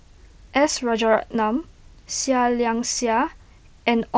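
No technical faults can be heard in this speech.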